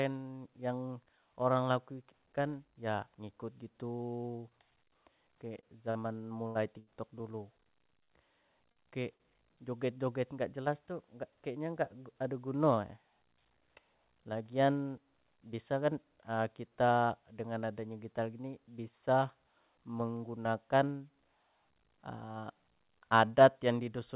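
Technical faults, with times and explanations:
5.60–7.23 s, repeated packet loss (robotic sound): five gaps in quick succession, the longest 80 ms, about 160 ms of audio missing and patched by stretching the preceding sound. Unlike a single concealed loss, the holes keep recurring, so the stretch turns choppy rather than briefly smeared.
8.04 s, short concealed packet loss: 40 ms never arrived and was filled by continuing the last sound before blending back. It is a single brief smear or wobble with real audio lost, unlike a stall, where the held sound is followed by nothing missing.
8.72 s and 9.16 s, short stall from a late packet: each time a packet arrived roughly 40 ms late, the jitter buffer ran dry, and the last sound was held until it came, then continued from the same point. Little or nothing is skipped, so a sound just lingers too long with a slight buzz or dip.
11.29–11.93 s, jitter buffer speed-up: right after "nggak jelas tuh nggak", the receiver trimmed a stretch of audio in pitch-period pieces to shed excess buffered delay, running about 9% fast. 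Pitch stays the same, so it sounds hurried rather than choppy, with no gaps or held sounds.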